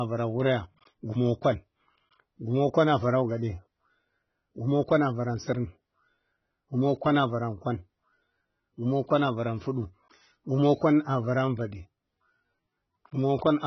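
From start to finish the speech stops dead at 6 kHz and sounds dull and smeared, with fizzy, warbling sibilants. This is heavy AAC compression, likely AAC-LC at a rate fitting about 16 kbps. Unlike a plain low-pass filter, it also garbles what remains below the cut-off.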